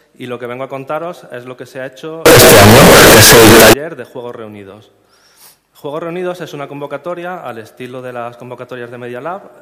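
From 2.26 to 3.73 s the audio becomes a loud, harsh, near-square wave at an almost fixed, high level, with background noise as loud as the rest. This is float read as integer, likely 32-bit float samples read as 32-bit integers. Unlike clipping, quiet passages blare, yet pitch survives.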